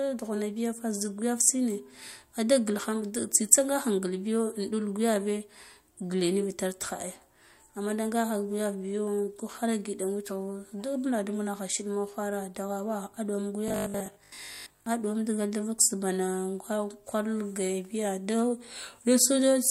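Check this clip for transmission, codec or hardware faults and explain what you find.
One fault stands out. From 13.68 to 14.86 s the speech has robotic sound from repeated short buffers: a rigid, metallic 50 Hz buzz, likely from 20 ms chunks being replayed to cover gaps in most of that stretch. Unlike codec warble, the buzz sits at a fixed rate set by the buffer length.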